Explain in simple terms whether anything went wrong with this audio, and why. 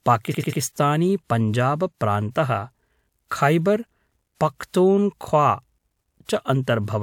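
Right at 0.30 to 0.58 s there's a stutter from repeated frames: a chunk of about 93 ms plays three extra times, stretching the speech by roughly 0.28 s.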